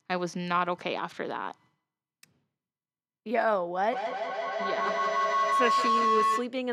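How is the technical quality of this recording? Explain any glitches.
The recording has one serious fault. From 3.93 to 6.54 s, feedback howl builds. A microphone-speaker loop gains level each pass. It rings near 1 kHz, with repeats every 150 ms or so, peaking about 2 dB above the speech.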